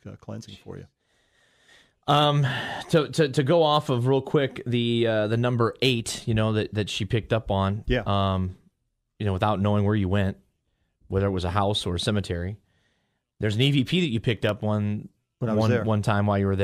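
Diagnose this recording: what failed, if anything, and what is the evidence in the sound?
Processor overload crackle at the driver or buffer stage, 14.37 to 14.49 s: several sub-millisecond buffers missed, left silent, showing as hard-edged silent gaps and thin broadband vertical streaks.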